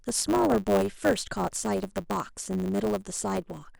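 From start to finish the speech carries a steady 100 Hz buzz and plays about 1.07 times too fast, the signature of a block size mismatch (truncated). One stage hands over blocks that fit 512 samples while the next reads slightly fewer, so each block's tail is discarded. Those regular cuts make the buzz. The timbre stays, which rules out a simple resampling or clock error, and the faster pace sets it apart from the padded kind, which slows audio down.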